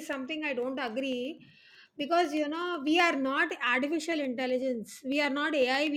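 From about 0.13 s to 5.87 s the speech picks up a steady ticking, one click every 0.125 s, so eight a second. That's periodic USB or driver dropouts: something stalls the bus or driver on a fixed schedule and a tiny slice of audio, well under a millisecond, gets skipped outright, not padded with silence. Each skip is a small discontinuity, so you hear a sharp tick, roughly fifty across that span, and only where there's sound to break.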